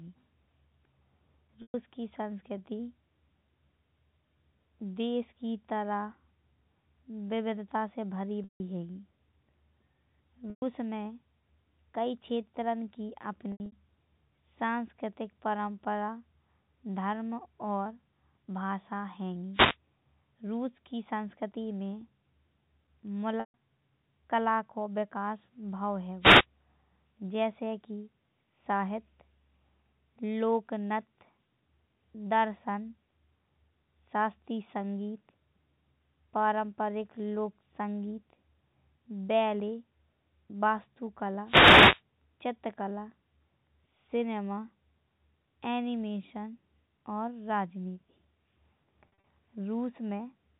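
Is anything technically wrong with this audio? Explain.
Yes. The speech has packet loss with pitch repetition at 1.62, 8.44, 10.5, 13.52, 23.4 and 49.08 s. Gaps of 120 to 160 ms, partly scattered at 13.52 and 49.08 s, were patched by looping the last pitch period. On the spectrogram these look like frozen, evenly spaced harmonic stripes fading into silence. They sound like a brief buzzy hold.

A wireless microphone noise hit occurs at 19.53–19.77, 26.20–26.46 and 41.44–42.02 s. Each is a fade in the FM radio link that lets receiver noise surge. On the spectrogram it shows as broadband static smeared across the voice. It sounds like a swish or crackle.

The G.711 telephone coding leaves the usual empty band above 4 kHz.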